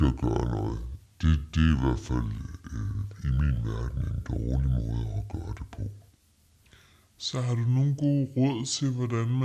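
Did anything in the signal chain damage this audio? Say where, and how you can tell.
Yes, at playback. A wrong sample rate runs through the whole clip. The speech is slowed to about two-thirds speed, and its pitch drops by 7 semitones. Because speed and pitch fall together, the samples were clocked out too slowly. That fits 48 kHz audio played at 32 kHz.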